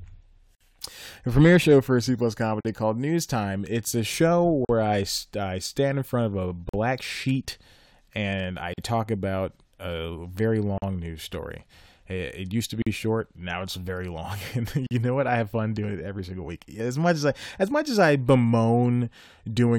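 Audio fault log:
0.55, 2.61, 4.65, 6.69, 8.74, 10.78, 12.82 and 14.87 s: gap at a join of encoded pieces. The speech drops out for a gap of 55 ms at the first join and 43 ms at each later one, on a regular 2.0 s cycle. The audio appears to have been encoded as separate pieces and butted together without trimming, so each join carries the encoder's start-up delay plus last-frame padding. The codec smears the edges, so the truly silent part is shorter, and speech resumes exactly where it stopped.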